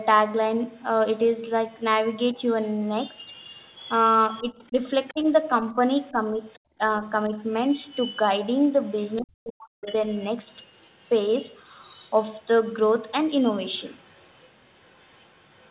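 From 0.73 to 1.81 s, and again from 2.36 to 4.42 s, a faint second voice sits under the speech. It is the other side's voice leaking through, likely because the echo canceller left loudspeaker sound in the microphone. The first stretch is very faint, roughly 40 dB down. The second is clearer, about 20 dB below the speech. Unlike a dip in level, this adds a separate talker rather than taking anything away.

From 4.42 to 7.32 s the talker's own voice is turned down while the leak returns (5.07 to 9.22 s), by up to about 10 dB. This is likely speech suppressed in double talk: the canceller cannot tell the two voices apart and attenuates both. The drop is far deeper, near 40 dB, from 9.20 to 9.79 s, and there the voice nearly cuts out. The leak continues from 9.81 to 12.73 s and from 13.53 to 15.71 s, falling from moderately faint to very faint.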